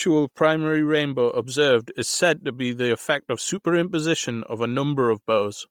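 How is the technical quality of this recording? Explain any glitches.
The quality is degraded throughout by heavy codec damage. The speech has a breathy, grainy edge from start to finish, likely from Bluetooth LC3 compression at a rate consistent with about 32 kbps in 10 ms frames. Upper spectrum is zeroed and refilled with noise, which on a spectrogram appears as smeared, speckled high bands.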